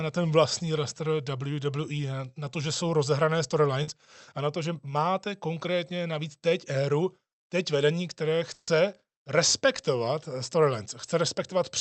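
Speech carried over a call link, band-limited to about 8 kHz as the codec path allows, with two packet-loss faults. The first is a short concealed packet loss at 3.83 to 3.89 s, just after "to že jsou rozehrané" and before "a na to že". About 40 ms of audio never arrived in time. The decoder bridged the hole by extending the preceding sound and then crossfading back into the real signal, which leaves a brief smear or wobble. The second is a burst of packet loss at 8.53 to 8.69 s, right after "éru teď vedení které". Here roughly 140 ms went missing in a row. Concealment stretched the last sound and faded it as the gap ran on, giving a held buzz or fading hiss with a brief silence of about 10 ms. The speech then picks up further along, and the audio that fell in the gap is lost.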